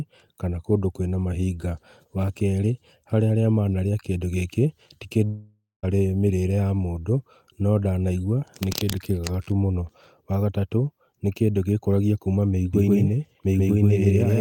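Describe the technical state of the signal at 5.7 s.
At 5.7 s the signal is inside a long network dropout running from 5.25 to 5.85 s, after "manarĩa kĩndũ gĩkĩ ti". Packets likely stopped arriving, so the receiver stretched the last sound into a fading buzz, then near-silence, before resuming at "mĩrĩre ya mũndũ" with about 0.58 s lost.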